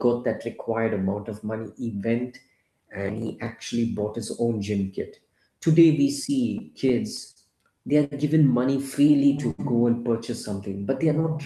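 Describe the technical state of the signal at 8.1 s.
At 8.1 s you're right inside a short stall from a late packet, running from about 8.04 to 8.13 s. A packet didn't turn up on time, the jitter buffer ran dry, and the receiver held the last bit of speech for roughly 71 ms until it showed up, then carried on from the same spot. Nothing's actually lost, but that sound drags on a touch too long with a faint buzz or dip, and everything after it lands about 71 ms later.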